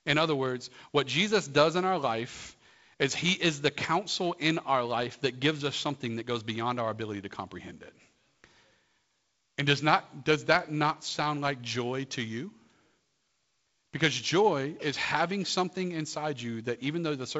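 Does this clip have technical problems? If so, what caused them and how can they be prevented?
No, this speech clip has no technical problems that need fixing. It has been carried through G.722 wideband telephone coding at 48 kbit/s, so it has nothing above about 7.7 kHz and only a faint trace of that coding.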